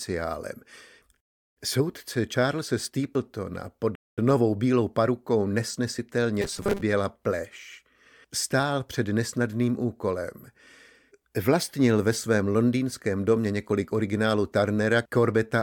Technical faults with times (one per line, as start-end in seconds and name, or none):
3.95-4.18 playback stall
6.42-6.82 robotic sound from repeated short buffers